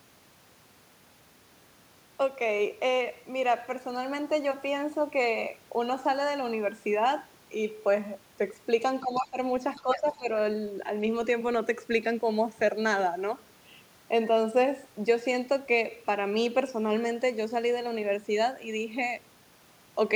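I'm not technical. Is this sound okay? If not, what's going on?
No, there are two problems, both packed into about a second just past the nine-second mark.

The first is speech suppressed in double talk. From 9.03 to 9.37 s, and again from 9.81 to 10.28 s, the voice suddenly drops a lot in level for a few tenths of a second and then comes back. What likely happened is that both people talked at once, and the echo canceller, the part of a call app that stops the far end hearing itself, couldn't tell the two apart and turned everything down.

The second is the other side's voice leaking through. A faint second voice slips in underneath from 9.14 to 9.27 s and again from 9.75 to 9.96 s. It's quiet, especially the second time. The likely cause is that the talker's device was playing the other side from a loudspeaker and the echo canceller didn't remove all of it from the microphone.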